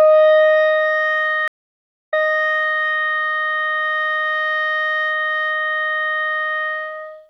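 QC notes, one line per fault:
1.48–2.85 s stream reconnect: the music stops for 645 ms and then comes back 731 ms earlier than where it broke off, repeating that stretch as the player rejoins the stream and the server resends from behind. The replay sets this apart from a plain dropout gap.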